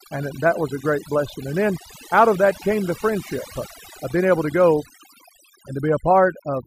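A speech recording suffers from overdone noise removal from start to finish: the noise reduction was set far too aggressively, so frequency bands sitting near its noise estimate are cut almost to nothing, taking the quieter parts of the voice with them. The gaps fall to near silence sprinkled with twinkling artefacts. On a spectrogram, pauses show as black with scattered isolated specks, while the speech looks patchy and holed.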